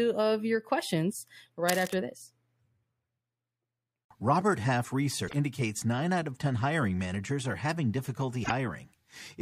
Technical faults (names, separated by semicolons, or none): cable scratch noise; damaged data in a compressed stream